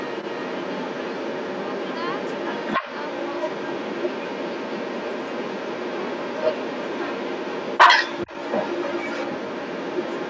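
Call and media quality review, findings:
Other side's voice leaking through, 0.0–10.3 s continuous. Second talker present throughout, roughly 10 dB above near-end speech. Likely cause: echo canceller failing to remove loudspeaker playback. Spectrogram: overlapping, unrelated harmonic stacks. Band ends at 8 kHz from normal call mic processing.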